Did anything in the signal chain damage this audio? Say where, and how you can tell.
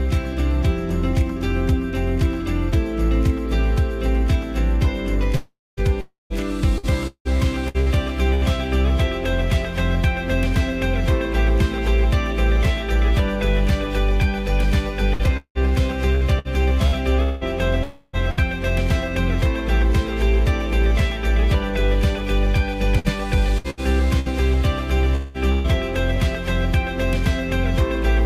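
Yes. Long network dropouts at 5.35–5.80 s, 6.01–6.33 s and 17.83–18.16 s: the sound smears into a fading buzz, leaving about 0.21 s and 0.15 s of silence in the first two. Audio then resumes with that stretch lost, likely from network dropouts.

Repeated packet loss (robotic sound) at 6.78–8.44 s, 15.13–18.40 s and 22.99–25.67 s, with six, seven and six gaps of up to about 0.19 s. Each gap is patched by stretching the preceding sound, giving choppy audio with pieces missing and a fifth to a quarter concealed.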